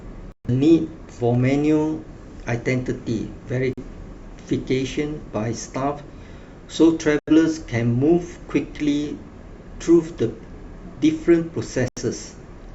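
Digital broadcast dropouts mute the speech at 0.32–0.50, 3.73–3.83, 7.19–7.32 and 11.88–12.02 s. The receiver lost frames and went silent, dropping about 128, 43, 85 and 85 ms of programme.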